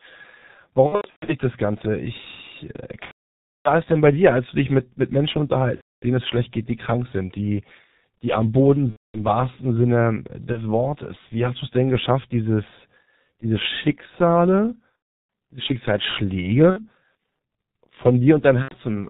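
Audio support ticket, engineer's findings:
G.723.1 codec throughout: muffled, hoarse, nothing above 4 kHz, smeared consonants; heavy damage, fits about 6.3 kbit/s with coarse 30 ms frames.

VoIP packet loss concealed by the speech codec: buzzy, fading extrapolated tone at 0.87–1.34, 3.05–3.71 (before "das denn bei dir"), 5.75–6.06 (before "denen es schlecht geht"), 8.90–9.23, 10.52, 14.96–15.29, 16.70–16.86, 18.62–18.77 s; gaps 30–600 ms.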